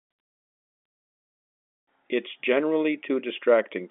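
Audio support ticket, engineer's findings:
No faults found; the speech carries the expected G.711 telephone-line character, band-limited to roughly 200 Hz to 3.5 kHz, which is normal for this path.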